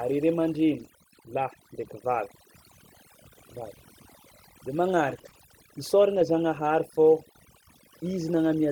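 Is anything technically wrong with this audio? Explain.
Yes. Overdone noise removal runs through the whole clip: a noise reduction stage set far too aggressively cuts individual frequency bands whenever they approach its noise estimate. The background drops and breaks up into twinkling specks.

Several losses were covered by a lost packet rebuilt from error correction, at 0.79–0.81, 1.79–1.85, 5.09–5.19, 5.25–5.27, 5.33–5.35 and 6.15–6.21 s. The decoder played low-bitrate copies carried in the following packets, lasting roughly 20 to 60 ms, which fits one to three 20 ms frames each. There is no gap, but those moments sound briefly rougher and noisier.

Two short concealed packet losses sit among those repairs, at 5.21–5.25 and 5.29–5.33 s. About 20 ms of audio each time never arrived, and the receiver extended the preceding sound to fill the hole before blending back. The result is a quick smear or wobble inside an already damaged stretch around 5.1–5.4 s.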